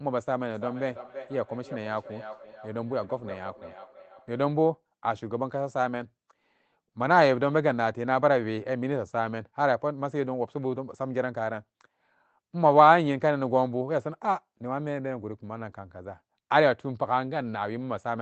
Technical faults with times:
0.53-4.56 feedback echo between two devices

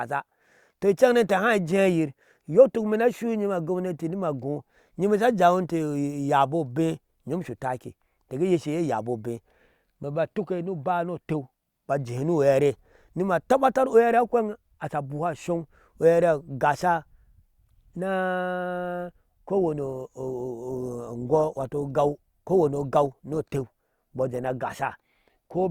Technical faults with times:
19.55-25.71 adaptive stream at a lower bitrate

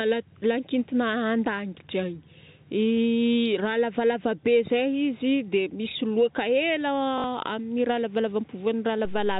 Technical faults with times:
7.18-7.24 packet loss with last packet repeated
9.05-9.40 DC step

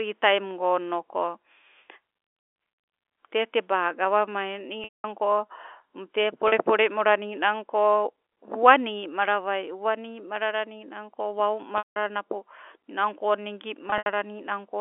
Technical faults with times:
4.84-5.04 packet loss with pitch repetition
6.48-6.52 packet loss with pitch repetition
11.78-11.96 packet loss with pitch repetition
13.90-14.06 packet loss with pitch repetition

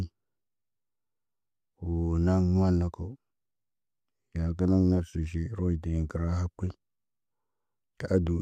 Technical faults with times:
none

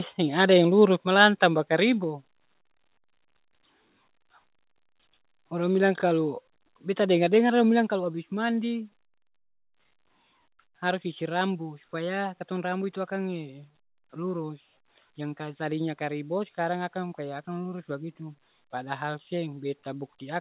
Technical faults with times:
1.02 microphone volume stepped down
1.21-1.25 microphone overload
2.04 microphone volume stepped down
7.89 microphone volume stepped down

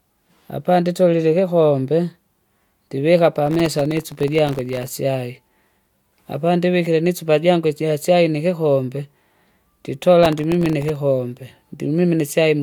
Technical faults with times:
3.47-4.93 processor overload crackle
10.23-10.96 processor overload crackle

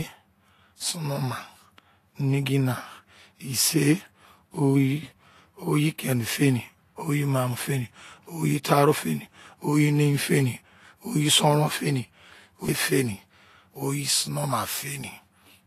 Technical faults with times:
0.00-15.66 Vorbis compression

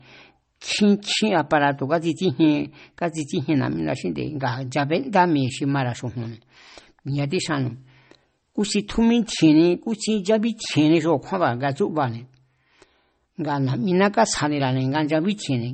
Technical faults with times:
0.00-15.74 MP3 compression

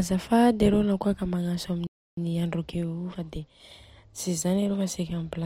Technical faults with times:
1.87-2.17 playback stall

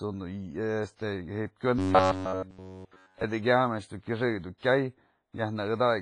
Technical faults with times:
0.00-6.02 WMA compression
0.96-0.99 pre-echo
1.79-3.24 robotic sound from repeated short buffers
4.58-4.63 pre-echo

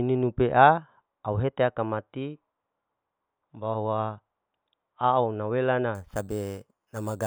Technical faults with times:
5.95-7.26 imaging from sample-and-hold upsampling

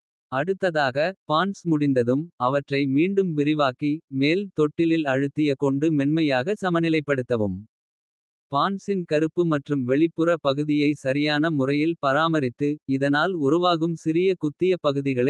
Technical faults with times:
none

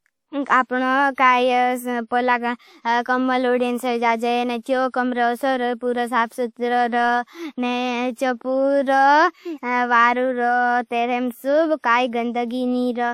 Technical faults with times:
1.14-1.18 pre-echo

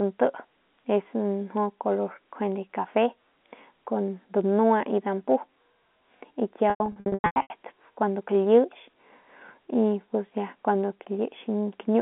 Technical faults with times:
6.70-7.50 packet loss with pitch repetition

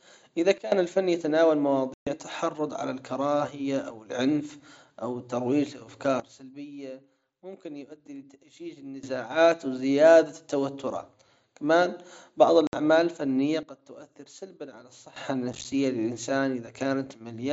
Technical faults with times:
0.58-0.72 sudden gain jump
1.94-2.07 unconcealed Bluetooth headset packet loss
6.20-9.03 sudden gain jump
12.67-12.73 unconcealed Bluetooth headset packet loss
13.63-15.16 sudden gain jump
15.53-15.65 unconcealed Bluetooth headset packet loss

